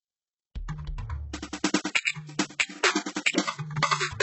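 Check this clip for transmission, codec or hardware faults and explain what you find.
Two codec faults turn up in this music clip: heavy low-bitrate compression across the whole clip, and two short pre-echoes.

Throughout, the treble is likely rebuilt by HE-AAC compression at a very low bitrate, around 8 kbps. Only the lower spectrum is really coded, and the highs are copied up from below, so nothing genuine remains above 8 kHz. Cymbal-like and sibilant content sounds gritty, metallic and out of step with the harmonics beneath.

At 1.32 s and 2.05 s, pre-echo appears. Each sharp attack falls late in a transform block, so quantisation noise sized for the loud hit spreads back into the quiet moment before it. A short hiss runs about 14 ms and 16 ms ahead, softening and smearing each onset.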